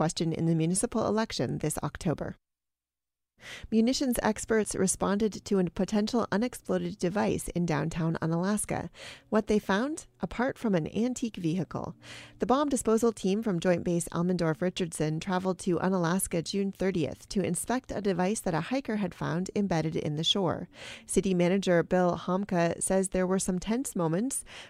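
No technical faults detected.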